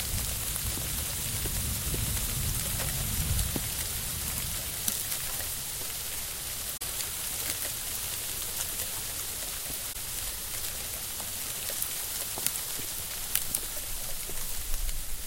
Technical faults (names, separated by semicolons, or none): corrupt frame concealed